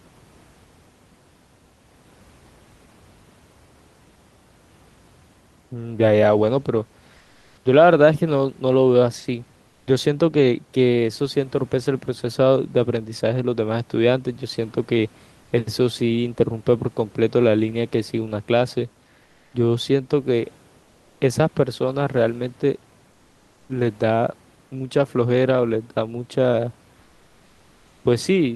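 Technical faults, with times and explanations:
7.19–7.63 s, 9.71–9.87 s, 15.43–15.51 s, 19.23–19.51 s, 20.83–21.19 s and 27.03–28.03 s, comfort noise in place of the background: in each speech pause the sender has likely stopped transmitting under Opus DTX, so the receiver fills the gap with synthetic noise. The room's own background noise gives way to a flat, featureless wash, about 1 to 3 dB quieter in most gaps, level at 7.19 s, and about 13 dB quieter at 9.71 s.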